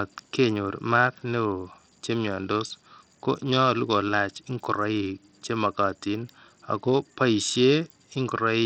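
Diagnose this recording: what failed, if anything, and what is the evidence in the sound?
Bluetooth SBC compression runs throughout the speech, likely introduced at the codec stage. The treble flickers and drops out, and gritty noise and aliasing ride on top. That fits a starved bit pool near 64 kbps, with the upper sub-bands unfunded and the rest coarsely quantised.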